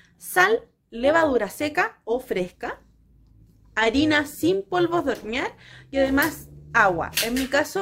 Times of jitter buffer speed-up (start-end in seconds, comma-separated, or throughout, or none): none